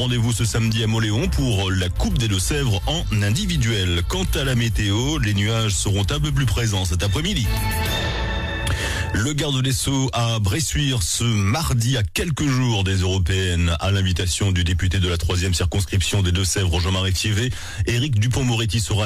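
No technical faults can be heard anywhere in the audio.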